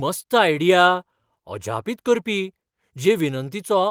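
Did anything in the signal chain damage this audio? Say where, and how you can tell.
No, nothing in the signal chain damaged this audio.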